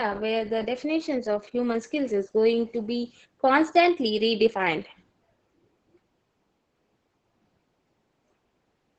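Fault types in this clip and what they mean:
Opus voice compression: The speech was squeezed through Opus's SILK linear-prediction coder at a very low rate, fitting roughly 10 kbps, so the band stops near 8 kHz and the excitation is coarse, making the voice muffled, hoarse and faintly robotic throughout.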